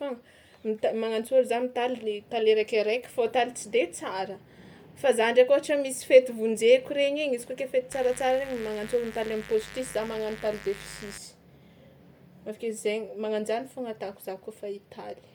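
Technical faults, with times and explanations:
Throughout: Bluetooth LC3 compression. The speech has a breathy, grainy edge, with plainly audible damage in the upper range, most likely from a transform codec working at a modest bitrate. At a rate that fits around 48 kbps, the encoder discards much of the upper spectrum in each short frame, probably 10 ms, and fills the gaps with noise. That noise fill produces the rough sheen, and almost nothing is heard above 20.2 kHz.
7.92 to 11.18 s: mains buzz. Sharp switching spikes from the 50 Hz supply, of the kind a dimmer, rectifier or missing shield lets into the signal path, arrive twice in every mains cycle. Their harmonics reach from the 50 Hz fundamental up into the kilohertz range, so they are heard as a steady, raspy buzz rather than a clean hum. The buzz sits roughly 15 dB below the speech and stops at 11.18 s.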